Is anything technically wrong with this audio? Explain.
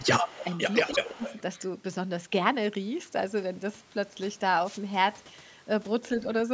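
Yes, this speech clip has three kinds of fault, while the band limit at 8 kHz is simply the call's microphone processing.

Speech suppressed in double talk, from 0.0 to 0.42 s and again from 0.97 to 1.25 s: the voice dips by up to about 20 dB and thins out in pieces, roughly 300 ms of damage in each stretch. This is likely an echo canceller that heard both sides at once, could not tell the near talker from loudspeaker echo, and turned everything down.

Echo leak, from 0.29 to 1.09 s and from 1.25 to 1.6 s: a fainter copy of the voice trails the original by 156 ms, sitting about 15 dB below it. The cause is likely a speakerphone whose echo canceller left part of what its microphone picked up from the loudspeaker, sending that residue back down the line.

Wireless microphone noise hit, from 4.64 to 4.80 s: a brief swish of static lasts about 160 ms. An analogue FM radio microphone's signal faded as reflected paths cancelled each other, so the receiver's noise floor rose and briefly broke through before the signal recovered.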